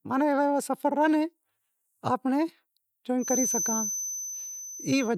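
From 3.17 s to the end, a thin, steady whistle near 6.1 kHz sits only a few decibels under the speech, swelling and fading slowly in level. This feedback whistle is likely a loudspeaker-to-microphone loop held at the edge of feedback, sustaining one tone without running away.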